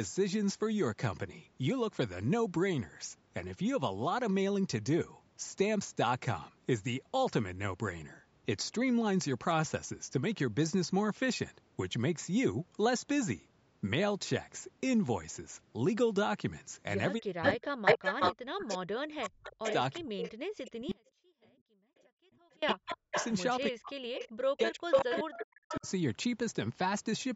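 From 17.18 to 25.87 s the speech is pushed down in pieces, by up to about 40 dB and for roughly seven seconds in total. This is speech suppressed in double talk, likely an echo canceller attenuating both its own talker and the loudspeaker echo while both ends were active. Starting at 17.42 s and running to 23.36 s, an echo leak brings back a copy of the speech delayed by 375 ms at about the same level, most likely loudspeaker pickup that the far-end canceller did not remove. Between 20.92 and 22.62 s the signal drops out abruptly for 1.71 s, leaving only a faint residue roughly 30 dB down. This is an audio dropout to a faint residue, likely from lost signal on a path that stayed live. The echo returns briefly from 24.15 to 24.29 s, delayed 389 ms and about 10 dB under the speech. It comes back again from 24.91 to 25.89 s, delayed 393 ms and slightly louder than the speech.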